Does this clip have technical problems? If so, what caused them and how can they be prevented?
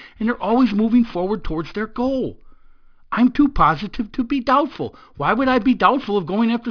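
Yes. Aliasing throughout: sibilants turn gritty as energy above 5.5 kHz folds back, around 25 dB down, which fits downsampling to 11 kHz without filtering. Apply an anti-aliasing low-pass below 5.5 kHz before lowering the sample rate.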